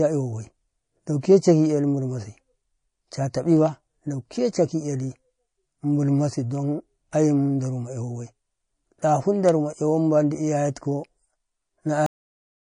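MP3 compression runs through the whole speech clip, and the damage is plainly audible. The sound has a watery, swirling quality, and sibilants chirp and smear. The likely cause is an MP3 encoder starved of bits, at a rate that fits roughly 40 kbps. It zeroed weaker frequency lines, which flicker on and off from frame to frame.

Pre-echo appears from 1.21 to 1.23 s as a brief hiss, about 23 ms long, just ahead of a sharp attack. The noise rises about 15 dB above the quiet before it. The encoder kept a long transform window, around 52 ms, instead of switching to short blocks. Quantisation noise sized for the loud onset was therefore spread back across the silence in front of it, and the attack itself sounds softened.

A cut-off end comes at 12.06 s. The audio stops abruptly in the middle of the sound and drops straight to digital silence with no natural decay. The final buffers were never written or played out, so the remaining stretch to the end of the clip is empty rather than fading away.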